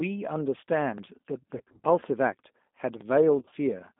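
Throughout, the G.729 codec confines the speech to a telephone band of roughly 200 Hz to 3.6 kHz and rebuilds it from a filter, pitch predictor and sparse pulses. The result is plainly rough and synthetic, a reconstructed grain rather than the clean dullness of simple low-pass filtering, which fits an 8 kbit/s G.729A stream.

At 0.98 s, overlapping chunks cause a brief stutter. The next chunk starts about 13 ms before the previous one ends, so that sliver plays twice at the 1 s join. The repeated fragment sets it apart from a dropout, where sound would be missing instead.

From 1.58 to 1.80 s, and again from 3.40 to 3.54 s, VoIP packet loss concealed by the speech codec smears the speech into a fading buzz. About 120 ms and then 80 ms went missing in runs of up to 30 ms. The decoder bridged each run by extending its last pitch and filter at falling gain. Unlike a hard gap or click, the sound stays weak and distorted across each stretch.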